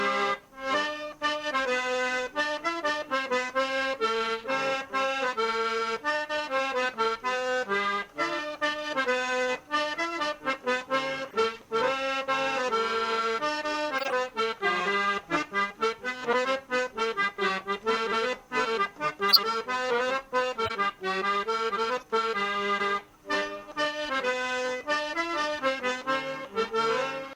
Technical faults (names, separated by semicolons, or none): corrupt frame decoded; compressed frames skipped